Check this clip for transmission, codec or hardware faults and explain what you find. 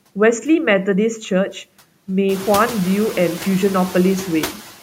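One fault runs through the whole clip, noise suppressor artifacts. The background noise dips between the words and swells beneath them, because a frame-by-frame suppressor cuts the noise by about 12 dB. The room noise grows by about 17 dB around 2.5 s, still sitting about 16 dB below the speech.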